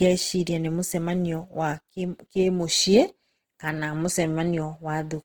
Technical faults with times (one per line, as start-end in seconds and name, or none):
0.00-5.25 Opus compression